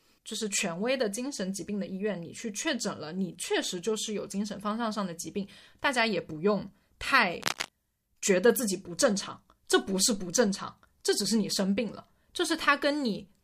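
Speech clip with cable scratch noise from 7.41 to 7.69 s: a burst of scratchy rustling at roughly 5 dB below the signal, likely a worn connector or cable being moved.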